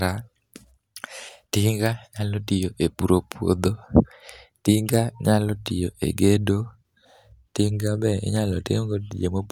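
Speech, with no technical fault anywhere in the recording. Nothing in the signal calls for a time or a cause to be noted.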